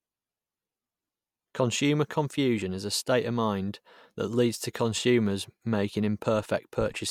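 Listening to the speech here, nothing stood out as a technical problem at any point.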